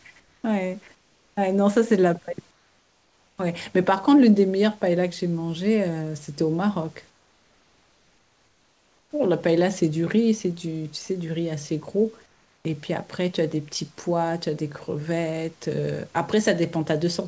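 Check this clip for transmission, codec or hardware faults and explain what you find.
Comfort noise replaces the background in five pauses: 0.20–0.44 s, 0.95–1.37 s, 2.51–3.38 s, 7.10–9.11 s and 12.26–12.65 s. The likely cause is discontinuous transmission. The sender goes quiet when no speech is detected. The receiver then generates shaped synthetic noise. The real room background turns steady and featureless, about 5 to 6 dB quieter, until speech resumes.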